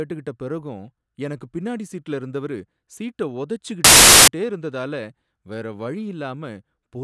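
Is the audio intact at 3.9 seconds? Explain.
No. At 3.9 seconds the speech is swamped by a hard-edged burst of very loud white noise running from 3.84 to 4.28 s. This is file tags played as audio: an embedded cover picture's compressed bytes are being read as samples, producing dense static.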